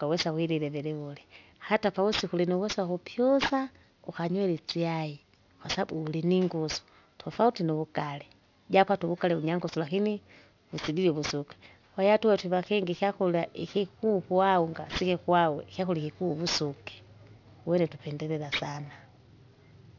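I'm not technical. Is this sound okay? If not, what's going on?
No. Throughout, the speech was squeezed to a lower sample rate without removing high sounds first. This is aliasing: hissy sounds fold back below 6 kHz, turning gritty and metallic.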